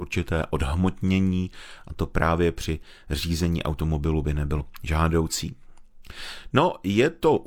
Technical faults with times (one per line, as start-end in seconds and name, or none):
4.55-4.61 compressed frames skipped